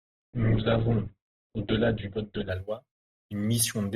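For the first 2.5 s the speech sounds muffled and smeared, with nothing above about 4.4 kHz and obvious codec artefacts, then at 2.5 s it snaps to full clarity with no gap or dropout. This is an adaptive stream starting at a low bitrate: the player began on a cheap Opus version, which fits a rate near 8 kbit/s, so playback could start quickly, then switched to a far better one, consistent with about 64 kbit/s, once it had gauged the connection.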